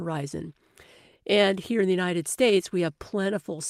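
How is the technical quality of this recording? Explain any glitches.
No glitches or faults heard.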